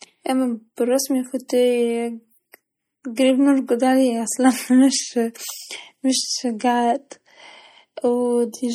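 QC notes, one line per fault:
Throughout: MP3 compression. The speech sounds watery and swirly, with sibilants breaking into metallic chirps and the top end dull. This is likely low-bitrate MP3 coding, consistent with about 48 kbps. Short of bits, the encoder cuts the treble at a fixed frequency and drops weak spectral lines that flicker on and off between frames. On a spectrogram this shows as a flat ceiling on the high frequencies, with isolated blobs and holes scattered below it.
1.48 s, 2.52–2.54 s and 3.16 s: pre-echo. Before each of these sharp onsets comes a brief smear of hiss, lasting 15 ms, 21 ms and 17 ms, and the attack itself sounds softened. The codec spreads its quantisation noise across the whole transform block, so noise sized for the loud onset also fills the quiet moment just before it. On the waveform a fuzz sits ahead of each transient, and on the spectrogram a broadband haze leads each onset.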